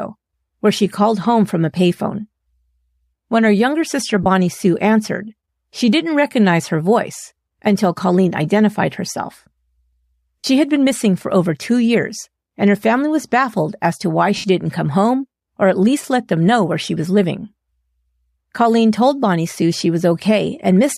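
Short noisy smears break up the speech at 4.23 to 4.26 s, 10.41 to 10.44 s and 14.37 to 14.44 s, lasting 30, 40 and 70 ms. These are lost LE Audio frames. The decoder filled each gap by reusing the last spectrum with randomised signs. The gap lengths fit whole 10 ms frames from what is likely LC3 compression.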